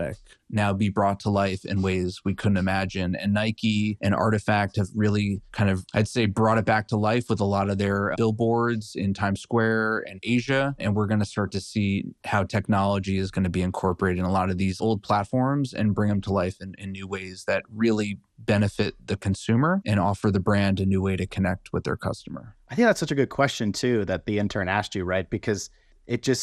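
From start to finish the speech carries MP2 compression damage, likely from MPEG Layer II encoding at a low rate that fits about 80 kbps. Starved upper sub-bands switch off and flicker, leaving dull, gurgling, granular sound; a spectrogram shows a ragged, blinking top edge in blocky bands.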